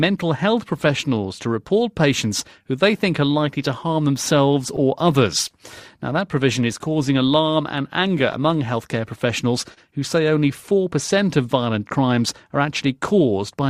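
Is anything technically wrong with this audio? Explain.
Yes. There is clock drift between sender and receiver throughout. The sender's clock runs slow, by roughly one and a half percent, so the receiver's jitter buffer keeps draining. Unlike a single network glitch, this sets up recurring, unevenly spaced timing trouble across the whole clip.

Repeated timing corrections run from 1.14 to 3.33 s and again from 6.88 to 13.26 s. In both stretches the receiver repeats short pieces to stay in step, all in the same direction. Playback runs at 98% and then 99% speed, adding roughly 50 ms and then roughly 70 ms. The result is an unsteady tempo with faint hiccups rather than an abrupt cut.

There are two short stalls from a late packet, at 5.48 to 5.52 s and at 9.74 to 9.79 s. Each time the buffer ran empty, so the last sound was held for 19 ms and then 29 ms before resuming at the same spot. Nothing is lost, which is what separates these from a dropout: a sound briefly lingers, with a slight buzz or dip.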